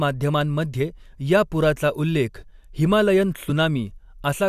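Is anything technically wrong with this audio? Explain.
Yes, there are two brief faults from damaged data in a compressed stream, at about 0.79 s and 3.49 s. Corrupted bytes make the decoder misread those frames and lose sync until it finds the next frame header, producing a short glitch.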